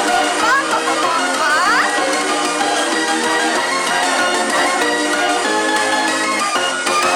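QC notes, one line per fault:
Throughout: hard clipping, about 6 dB of overdrive flattening a small share of peaks; the squared-off tops add high harmonics, heard as crackle on loud moments.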